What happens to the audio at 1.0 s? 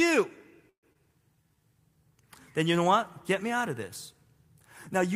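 Just before 1.0 s, from 0.93 to 0.97 s, there is a short concealed packet loss. About 60 ms of audio never arrived. The receiver bridged it with roughly 21 ms of synthesised continuation and skipped ahead by about 40 ms. The result is a brief smear or wobble. On a spectrogram the harmonics stretch flat, then jump. In the waveform a repeated cycle blends into a mismatched one.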